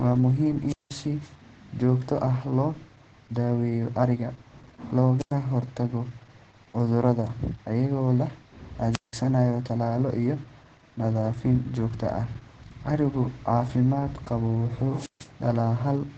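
Wireless microphone squelch dropouts break this speech recording at 0.67 to 0.94 s, 5.19 to 5.33 s, 8.91 to 9.15 s and 14.95 to 15.29 s. Each time the radio signal fades, hiss rises, and the receiver's squelch mutes the output for 186, 96, 177 and 149 ms before the voice returns. Opus voice compression is audible throughout: the SILK coder runs wideband, with nothing above 8.6 kHz, and its coarse excitation coding leaves the voice heavily muffled, hoarse and faintly robotic, which fits a bitrate around 10 kbps.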